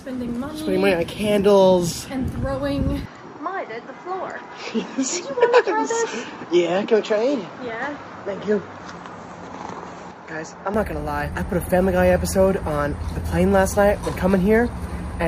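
At 3.06 s the sound abruptly loses everything above 7.6 kHz and gains a faint new background hiss, then clears again at 10.74 s, with no gap and little level change. This is likely an input switched to a poorer device. The new noise floor sets it apart from a plain filter or codec change.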